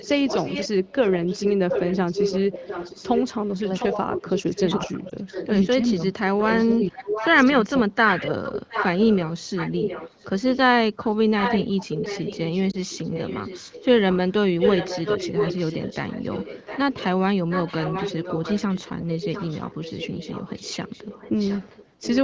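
A speech clip carrying an echo leak through almost its whole length. The far end was likely on a loudspeaker whose echo canceller failed to remove what its microphone picked up, so the sound returns 710 ms late at about 5 dB below the direct speech from 0.0 to 5.92 s, 6.57 to 7.28 s, 8.08 to 10.57 s and 10.96 to 17.05 s, then about 10 dB down from 17.49 to 22.18 s. That produces a trailing, overlapping double of the talker. Where both sides were active, the canceller likely could not tell the near talker from the returning echo and pulled both down, giving speech suppressed in double talk. Between 3.6 and 7.39 s the speech dips by as much as about 20 dB, for around two seconds in total, and from 7.92 to 8.36 s a shorter dip reaches about 15 dB. Separately, radio errors caused lost AMR speech frames, with one frame dropped in each event. The AMR-WB decoder, running at 15.85 kbit/s, bridged each gap by repeating its last good parameters at falling gain, producing a brief dip or warble from 5.10 to 5.13 s and again from 12.71 to 12.77 s before the speech recovers.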